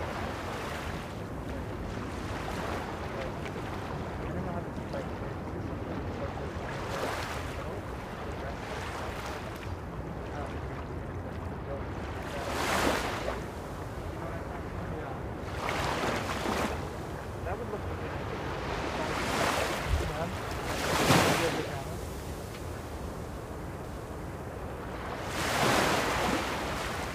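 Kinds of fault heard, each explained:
CD skip: The laser jumped to another turn of the disc's spiral. At 23.84 s, a mute of a couple of milliseconds ticks, and the sound resumes elsewhere.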